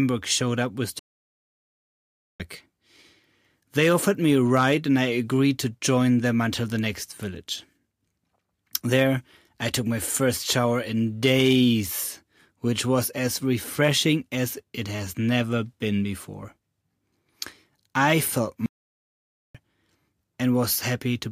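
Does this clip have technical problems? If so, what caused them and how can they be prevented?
Yes. The player likely ran short of buffered data or had its audio thread blocked, causing two playback stalls. The speech cuts to silence for 1.4 s from 0.99 to 2.40 s, just after "showed up with", and for 0.89 s from 18.66 to 19.55 s, after "I felt", before carrying on. A larger playback buffer and a high-priority audio thread would prevent these stalls.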